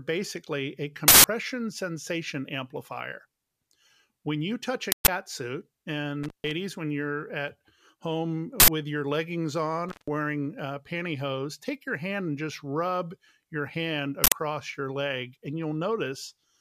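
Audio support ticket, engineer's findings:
Uninitialised buffer: loud bursts of digital noise at 1.08–1.24 s, 4.92–5.08 s, 8.60–8.68 s and 14.24–14.32 s, lasting 160 ms or 80 ms each. The playback buffer was read before audio was written to it, so stale memory played as samples. Unlike a dropout, the signal is replaced by noise.

Intermittent contact: speech cuts out at 6.23–6.51 s and 9.89–10.08 s, with the line open for about 136 ms and 149 ms, crackle at each edge and faint hiss in the gap. A loose cable or connector is momentarily breaking the path. Unlike the buffer fault, this is sudden quiet rather than a burst.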